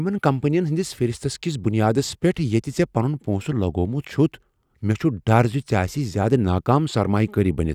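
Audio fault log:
Nothing to log here; I listened to the whole speech clip and didn't catch a single fault.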